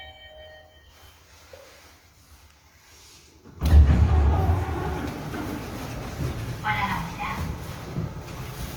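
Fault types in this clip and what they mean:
Opus compression: The sound is plainly roughened throughout. Tonal parts turn grainy and noisy rather than swirling. This is likely Opus in its music mode, which keeps each band's energy but fills starved bands with folded or noise-like content. The damage level fits a rate near 24 kbps. The band stays wide, reaching about 20.1 kHz, so the trouble is texture, not dullness. No muffled, hoarse speech-mode sound appears.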